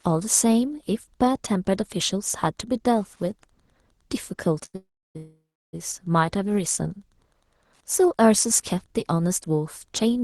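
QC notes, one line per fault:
4.65–4.76 s, short stall from a late packet: the sound is held for about 80 ms with a slight buzz or dip because the jitter buffer ran dry, and nothing is lost.
4.76–5.17 s and 5.17–5.75 s, call audio freeze: a fading buzz or hiss drops to about 0.3 s of silence each time, then resumes unbroken, likely from packets delayed and an emptied jitter buffer.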